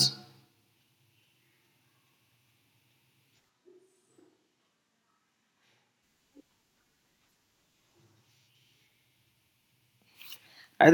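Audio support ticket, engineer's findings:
3.51–6.01 s: speech abruptly turns roomy and hollow, thinner low end, roughly 5 dB quieter, room noise rising to about 25 dB below speech. Likely switch to a distant microphone. Instant changeover and back, with the noise floor rising too, rules out a gradual fade or added reverb.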